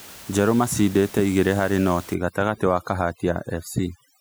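From 2.14 s to the end, the background collapses into near silence dotted with twinkling specks. This is overdone noise removal: the reduction is set so hard that bands near its noise estimate are cut away, taking quiet speech detail with them. Before that point, the room noise, sitting about 21 dB below the speech, is still audible.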